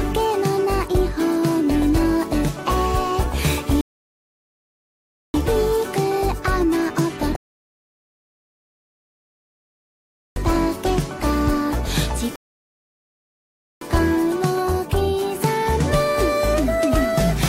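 The audio halts three times in rebuffering stalls, at 3.81 to 5.34 s, 7.36 to 10.36 s and 12.36 to 13.81 s, adding about 1.5 s, 3.0 s and 1.5 s of silence. Each time the player has run out of downloaded data and waits for more. What separates this from a dropout is that playback resumes exactly where it stopped, so nothing is skipped and time is only added.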